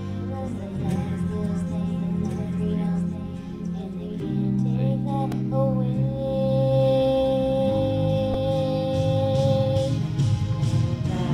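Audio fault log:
0.0–4.2 s, doubled audio track: a second full-band copy of the sound runs about 1.5 s behind the original, about 5 dB quieter, with no decay or room colour. It is already present when the clip opens and cuts off abruptly at 4.2 s. The likely cause is the same audio being mixed in twice, either captured again through a slower path or held as two out-of-step copies by an edit.
5.32 s and 8.34 s, repeated buffer: each is a click or brief buzz where a short piece of about 2.67 ms plays again with a hard join at every repeat. It repeats once at 5.32 s and twice at 8.34 s, losing roughly 3 ms and 5 ms of new audio. New audio arrived late, so the device replayed its last buffer. The length fits a 128-sample buffer.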